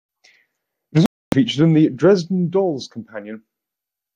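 Speech, with a digital broadcast dropout: the receiver stopped getting valid frames and muted, so the sound drops to silence from 1.06 to 1.33 s. That gap of about 264 ms fits roughly eleven lost frames, and the audio sent during it never returns.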